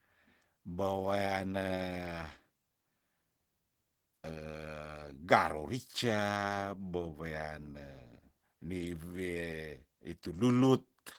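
Throughout, Opus voice compression at a rate consistent with 16 kbps leaves the speech hoarse and slightly robotic; the spectrogram shows coarse, blocky detail reaching 23.5 kHz.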